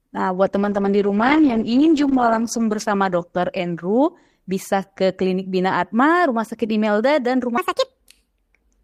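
From 0.56 s to 5.05 s, a call bitrate drop cuts the encoder's target from 40 kbps to 12 kbps, holding the lowest rate for 2.14 s. The speech is coded coarsely and loses its high frequencies, sounding muffled and watery until the bitrate recovers.

From 7.58 s to the end, a section at the wrong speed plays back 1.54 times too fast, likely because it was fitted to the wrong clock. Pitch rises by about seven semitones along with the tempo, so the speech turns high, thin and hurried.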